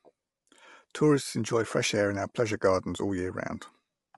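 From start to finish the speech sounds rough and grainy, with noise filling the gaps between harmonics and nothing above 11.6 kHz. That's likely low-delay AAC compression, whose short frames blur pitch detail, and the damage fits a bitrate around 32 kbps.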